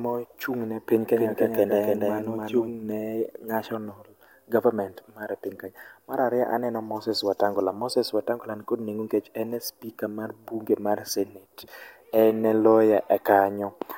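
A doubled audio track runs from 1.16 to 2.70 s, between "ne piny" and "ne national government mar". A second, full-band copy of the speech trails about 300 ms behind, roughly 5 dB quieter, with no room colour, cutting in and out abruptly. Likely a slower second capture path.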